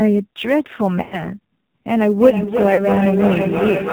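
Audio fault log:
Throughout: AMR narrowband mobile codec. Nothing above 4 kHz survives, and the sound is buzzy and synthetic, with the vocal-tract model driven by very few pulses per subframe. The heavy damage fits the low 5.9 kbps AMR-NB mode, where the excitation is too coarsely coded to sound natural.
Throughout: sample clock jitter. A faint roughness and hiss rides on the louder and brighter passages and drops away in pauses. The timing error scales with waveform slope, pointing to jitter of a few microseconds and an error floor about 35 dB below the signal.
1.02–1.28 s and 2.74–2.90 s: lost AMR speech frames. At each point the sound smears into a drawn-out, fading warble as the decoder repeats the last good pitch and vocal-tract settings at falling gain. Recovery is briefly weak and rough. The gaps fit runs of about five and two 20 ms frames.
2.2–3.93 s: feedback echo between two devices. 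The sound returns roughly every 0.3 s, thinner and more ringing with each pass. The loudest repeat sits only about 3 dB below the direct sound, so the repeats stack rather than die out as a second device replays the call into the first device's microphone.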